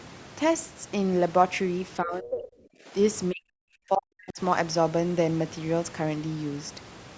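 Speech suppressed in double talk, from 2.02 to 2.93 s and again from 3.31 to 4.4 s: the speech level sinks sharply, by roughly 25 dB in the first stretch and by around 40 dB in the second, where it nearly vanishes, and the drop covers most of each span. The likely cause is an echo canceller that, with both ends talking at once, mistook this talker for loudspeaker echo and attenuated everything, while the call band stays capped at 8 kHz throughout.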